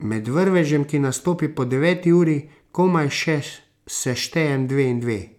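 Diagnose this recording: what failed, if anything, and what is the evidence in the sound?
Nothing failed in this recording, and no stage from capture through playback leaves a fault in the sound. The speech carries no dropout, distortion, or artefact that points to a broken link in the chain.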